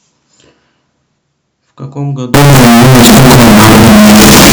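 From 2.34 s to the end, the 16-bit samples were likely read with signed and unsigned mixed up, flipping the top bit so every zero crossing jumps across the full range. The speech turns into very loud, harsh distortion, with quiet stretches blasting as loudly as the rest.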